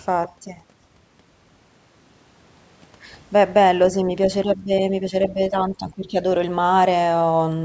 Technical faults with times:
4.45-6.16 speech suppressed in double talk

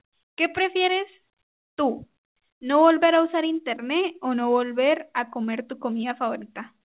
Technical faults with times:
none

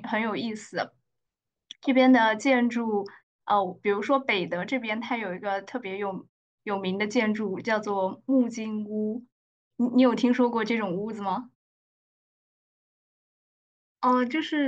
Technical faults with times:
none

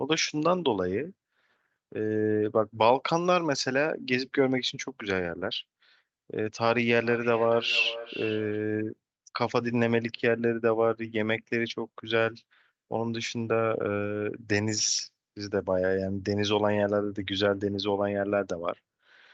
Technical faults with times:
6.92-8.66 feedback echo between two devices

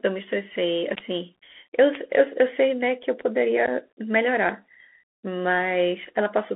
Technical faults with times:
0.00-6.56 Bluetooth CVSD headset codec
0.95 unconcealed Bluetooth headset packet loss
3.66-3.68 unconcealed Bluetooth headset packet loss

